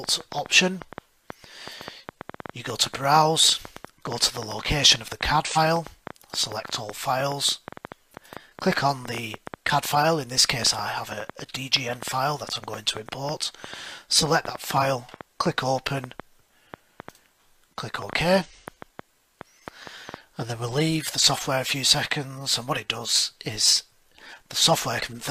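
From 0.04 s to 20.15 s a train of clicks ticks and pops across the sound, about 6.2 per second at an uneven pace, roughly 150 in all. They are heard in quieter stretches too, peaking about 10 dB above the audio itself. Because each click has much the same shape, they most likely come from electrical interference or a faulty connection or power supply adding a repeated pulse.

Four short skips interrupt the flow, at 5.40 to 5.58 s, 14.78 to 14.84 s, 18.41 to 18.47 s, and 24.98 to 25.03 s. Each one is a skip where compressed frames were not played, because they were missing or rejected by the decoder as damaged. Each jump loses roughly 40 ms.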